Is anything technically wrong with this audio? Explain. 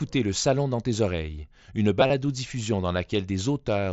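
Yes. There is concealed Bluetooth headset packet loss at two points in this speech clip, carried over a wideband mSBC headset link. At 0.43 s a single short loss is patched almost invisibly. From 2.01 to 2.10 s about 45 ms of audio is lost in bursts spread over 90 ms, the longest run 30 ms. The receiver repeats the best-matching recent stretch of waveform, so the gap becomes a steady buzzy tone at full level, with a slight warble when real audio resumes.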